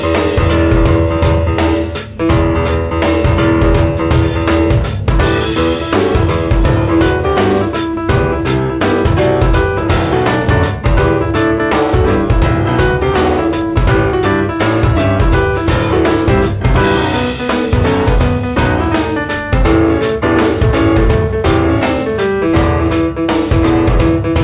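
No technical faults can be heard anywhere in the audio. It has clearly passed through a narrowband call path, with nothing above 4 kHz, which fits G.711 mu-law coding.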